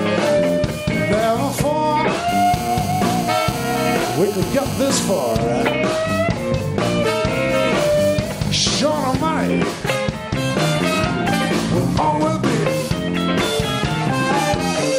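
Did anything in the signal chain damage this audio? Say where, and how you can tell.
Yes, GSM phone buzz in the analogue wiring, 2.29 to 5.37 s: a raspy 217 Hz buzz about 14 dB down, rectified bursts from a phone mid-call nearby.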